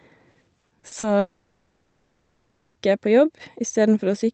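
From 0.31 to 1.06 s, repeated packet loss (robotic sound) leaves seven short holes, none over 40 ms, patched by extending prior audio. Roughly a third is concealed, so speech turns choppy. From 1.19 to 2.78 s, a long network dropout likely stopped delivery entirely. The receiver keeps stretching earlier sound throughout, producing a fading buzz or hiss with no silence, before normal speech resumes.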